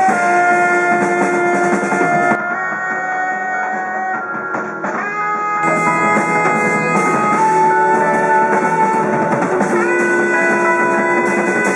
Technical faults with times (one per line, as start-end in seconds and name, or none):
2.35-5.63 input switched to a poorer device